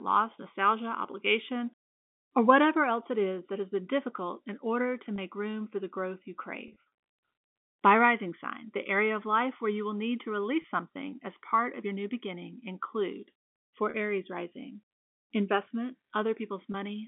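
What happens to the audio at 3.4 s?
Nothing goes wrong at 3.4 s: the speech carries on intact through that moment, heard through the narrow band of G.711 telephone coding.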